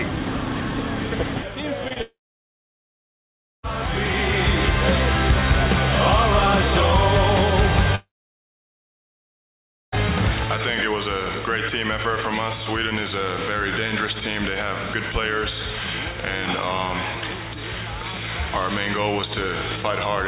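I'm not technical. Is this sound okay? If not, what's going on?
No, it has problems. Short concealed packet loss at 1.88 to 1.93 s and again at 1.93 to 1.99 s: tiny pieces of the call, about three hundredths of a second each, arrived too late. The receiver bridged each gap by stretching the previous sound, giving a quick smear or wobble.

A long network dropout is the likely cause of two longer gaps, from 2.02 to 3.66 s and from 7.95 to 9.95 s. Each begins with a brief fading buzz or hiss as the last sound is stretched, then goes silent for about 1.5 and 1.9 seconds. The audio returns with those stretches lost, inside a call line that carries nothing above 4 kHz.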